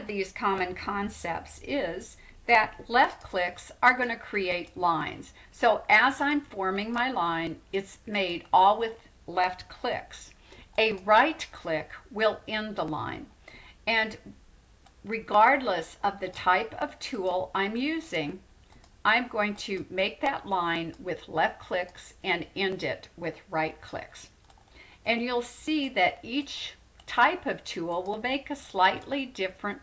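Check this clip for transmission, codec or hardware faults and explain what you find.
Nothing stood out on listening to the clip.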